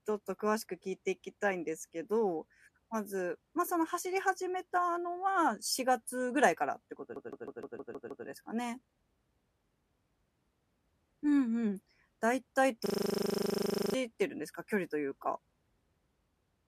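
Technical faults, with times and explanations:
7.16 to 8.26 s, CD stuck on one turn: the same 0.16 s slice of speech repeats seven times in quick succession, with a brief mute at each jump back. This is the even, rhythmic stutter of a disc whose scratch knocks the laser back one track at the same point on every rotation, so playback keeps returning to one spot instead of advancing until the pickup finally clears the damage.
12.86 to 13.94 s, system hang loop: a single 40 ms fragment cycles exactly 27 times, producing a steady buzz at 25 Hz rather than a distinct stutter. The player or driver stalled while the audio hardware kept reading the same small ring buffer over and over, so the loop length matches the buffer. When output resumes, roughly a second of speech has gone missing, skipped over during the freeze.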